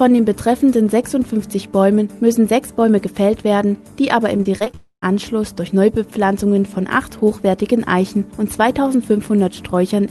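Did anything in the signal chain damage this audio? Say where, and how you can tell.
Yes. Network stage: from 4.37 to 4.75 s the sound turns choppy and robotic, with six short holes, the longest about 23 ms, each patched by extending the previous sound. About a quarter of that stretch is concealment rather than real audio, which is typical repeated packet loss.

Network stage again, straight after: from 4.75 to 5.04 s the audio stops arriving, and the receiver stretches the last sound into a fading buzz before about 80 ms of near-silence. Sound then resumes with the lost part simply missing, which points to a likely long network dropout.

Analogue or driver stage: at 5.94 s a single sharp loud pop sits on top of the sound, peaking about 5 dB above it, and lasts roughly 30 ms while the audio continues underneath. That pattern fits a voltage step or glitch, likely from a plug, switch or driver.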